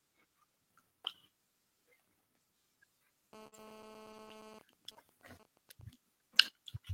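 From 3.33 to 4.59 s a GSM phone buzz sits under the speech. A nearby 2G phone in a call bursts 217 times a second, and the audio circuit rectifies those pulses into a hard, raspy buzz about 12 dB below the speech. On a spectrogram it is a comb of evenly spaced horizontal lines at 217 Hz and its many harmonics. The waveform has a regular pulse-like ripple riding on the signal.

At 3.47 to 3.54 s a burst of packet loss occurs. The receiver stretched the last sound for 46 ms, fading it into a held buzz or hiss, and 40 ms of real audio is skipped. A spectrogram shows smeared, frozen bands that decay, then an abrupt jump.

The lost packet rebuilt from error correction appears three times, at 3.52 to 3.54 s, 4.12 to 4.14 s and 4.27 to 4.29 s. Each time, 20 ms was played from a low-bitrate copy. These frames sound rougher and grainier, with noisier texture, but no gap.

From 4.26 to 4.29 s a short concealed packet loss fills 11 ms with an extrapolation of the preceding sound, and 20 ms never arrives. 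It is a brief smear or wobble, seen as a tiny discontinuity in the waveform.

From 4.61 to 5.82 s, with the phone's user silent, GSM signalling bursts give even ticks with a longer 217 Hz buzz twice a second, roughly 20 dB down. On a spectrogram these are intermittent blocks of harmonic lines.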